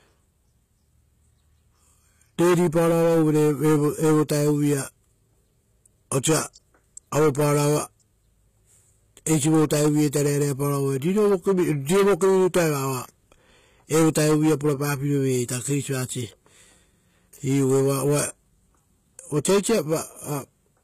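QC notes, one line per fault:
Throughout, HE-AAC compression: the speech carries plainly audible codec damage, with nothing above 14.9 kHz and a treble that sounds synthetic. This is likely HE-AAC v2 at a low bitrate, the sound pointing to around 20 kbps. Only the lower spectrum is truly coded; the upper band is rebuilt by copying lower bands upward under a coarse envelope, so harmonics no longer align across the crossover and sibilants turn gritty, metallic or lispy.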